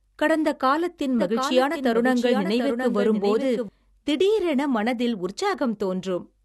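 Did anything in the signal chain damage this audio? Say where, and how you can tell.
Yes. A doubled audio track appears from 1.19 s to 3.69 s, just after "கடந்த காலத்தின்". A second full-band copy trails by roughly 0.7 s, about 5 dB quieter, with no reverb. It starts and stops abruptly. The likely cause is a slower second capture path being mixed back in.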